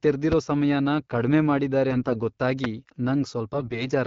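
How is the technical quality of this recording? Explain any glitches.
The recording has two kinds of glitch: two loud pops and two bursts of AMR bit errors. Both sit on top of the wideband phone coding, which is lightly coloured and fits the 12.65 kbit/s AMR-WB mode.

Loud pops occur at 0.32 to 0.35 s and again at 2.64 to 2.67 s. Each is a single sharp click, about 15 dB above the speech. The speech keeps running underneath. A sudden voltage step or pulse, likely from a plug, a switch, static or a driver glitch, was added to the signal. The circuits after it shaped that pulse into a brief thump.

AMR bit errors affect 1.89 to 2.18 s and 3.54 to 3.88 s. The voice keeps roughly its pitch and level but turns hoarse, scratchy and gargly. A weak radio link flipped some of the less protected bits in the coded frames, a few percent of them. The checks on the key bits still passed, so the decoder used the damage. 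Pulses landed in the wrong places, and the fine pitch, gain and spectral values drifted.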